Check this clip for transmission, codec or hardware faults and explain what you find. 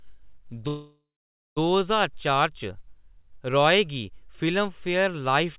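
There's one real problem: a call audio freeze from 0.68 to 1.59 s. The speech stops, the last sound is stretched into a fading buzz or hiss that drops to silence for about half a second, and then the talking carries on exactly where it left off. Nothing is lost; the sentence just gets shoved nearly 0.9 s later. That's likely packets stalling in transit and the jitter buffer running dry. The 4 kHz ceiling is just the narrowband call codec.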